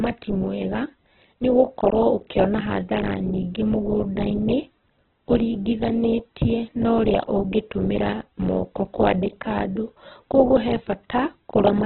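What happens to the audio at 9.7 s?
At 9.7 s the speech sounds as it does for the whole clip: narrow and boxed-in, with nothing above about 4.2 kHz, and a rough, grainy texture where tonal parts turn noisy. This is likely Opus compression at a very low bitrate, around 8 kbps. With too few bits, the music-style CELT coding fills bands by copying lower ones or with noise, and the encoder narrows the bandwidth, causing heavy damage.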